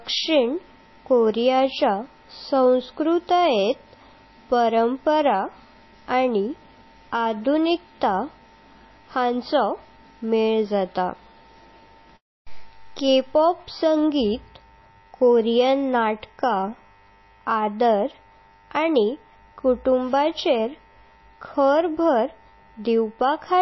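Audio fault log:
Throughout: MP3 compression, likely; nothing above 5.8 kHz and a plainly watery, swirly texture as weak bands drop in and out, consistent with roughly 24 kbps.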